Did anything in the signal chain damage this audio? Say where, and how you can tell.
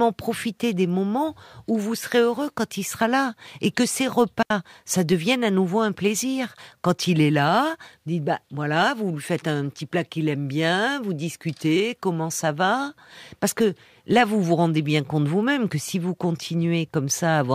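Yes, there's a digital wireless dropout at about 4.43 to 4.51 s, in the wireless transmission stage. The speech just vanishes for 80 ms into clean near-silence with no noise burst on either side, which is the receiver losing too much data and briefly muting with a very quick fade.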